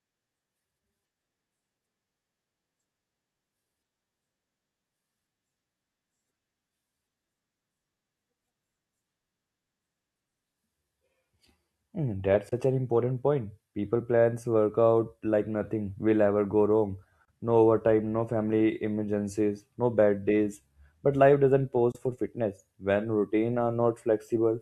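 Three brief gaps interrupt the speech: at 12.49 to 12.53 s, just before "an important point"; at 17.25 to 17.29 s, right after "will ever go wrong"; and at 21.92 to 21.97 s, between "life doesn't" and "for fitness". Each is a sudden silence, and the speech resumes as though it had continued underneath. This is likely a Bluetooth dropout, where a single late or lost packet of about 23 ms was discarded. The waveform goes flat, and the spectrogram shows a thin, empty vertical stripe.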